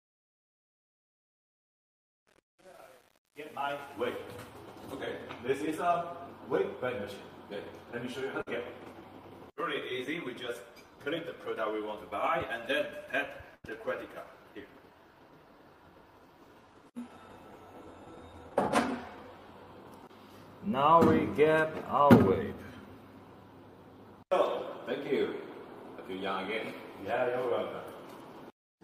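From 0 to 4.15 s, the fade-in at the start keeps too few bits and adds no dither, which fits a stage holding only about 9 bits. The fade's level rises smoothly to 4.15 s, but the waveform is reduced to coarse square steps while it is quiet. Across the whole fade the sound is gritty rather than emerging cleanly. This is truncation distortion on a fade.

At 8.41 to 8.48 s and again at 13.56 to 13.66 s, a burst of packet loss drops a run of audio. The receiver covers each gap by extending the last sound and turning it down, which can be heard as a held buzz or a fading hiss lasting about 51 ms and then 78 ms. The audio then jumps ahead, with about 60 ms and then 80 ms of the original missing.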